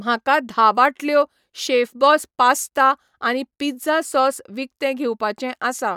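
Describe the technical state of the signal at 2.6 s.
At 2.6 s the speech signal is intact, with no audible dropout, distortion or other fault at that moment.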